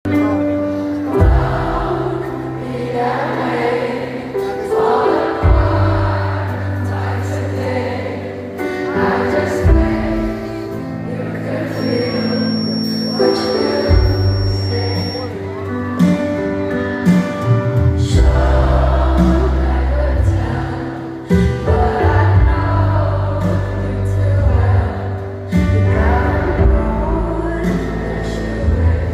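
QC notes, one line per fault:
11.69–15.33 s, feedback whistle: a thin, steady tone at about 5.5 kHz sits well below the main sound for roughly three and a half seconds, swelling and fading slowly in level. This is likely a loudspeaker-to-microphone loop held right at the edge of feedback.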